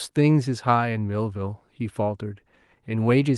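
Nothing in this short bit of speech stands out as a technical fault; it runs along without any glitch, dropout or hiccup catching the ear.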